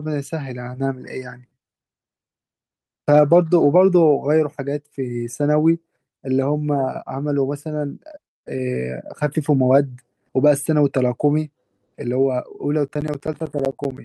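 A speech recording with two separate problems. Around 8.11 to 8.15 s there's a short concealed packet loss: about 20 ms of the stream never reached the decoder in time, and the receiver papered over it by carrying the preceding sound forward before blending back into the real signal. You hear it as a quick smear or slight wobble, and a short consonant could get swallowed in that gap. Then from 12.88 to 13.98 s you get periodic USB or driver dropouts: something is blocking the bus or the audio driver every 64 ms, and each time roughly 10 ms of signal is replaced by silence. That's about twenty evenly spaced ticks over that second or so, a steady rhythmic clicking that only shows up because there's sound running underneath it, which points to a background task interrupting the audio path on a fixed schedule.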